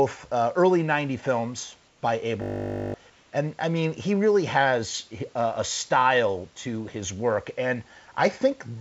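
From 1.88 to 2.02 s, the room background gives way to a smooth, featureless hiss about 3 dB quieter. This is likely comfort noise in place of the background: synthetic fill during a transmission pause, not silence as in a dropout. From 2.42 to 2.94 s, a system hang loop repeats one 20 ms stretch at 50 Hz, so it sounds like a steady buzz rather than a stutter, and roughly half a second of audio is lost. From 3.10 to 3.32 s, the same flat substitute hiss returns, this time about 2 dB below the real background.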